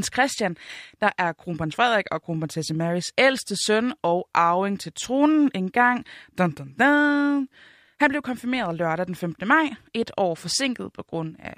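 No technical faults are audible anywhere in the speech recording.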